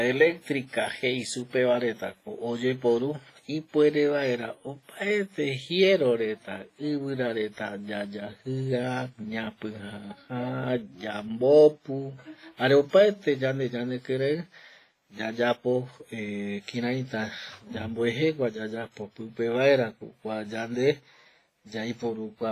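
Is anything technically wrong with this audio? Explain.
Yes. Throughout the speech there is heavy damage consistent with WMA compression, likely from a low-bitrate encode; the heaviness fits something near 24 kbps. A transform coder with long blocks smears quantisation noise over tens of milliseconds and zeroes weak spectral lines, so the voice sounds ringing and washy, with hiss that breathes alongside it. A spectrogram shows a hard ceiling at 15.5 kHz, patchy holes between harmonics, and noise smeared before and after syllable onsets.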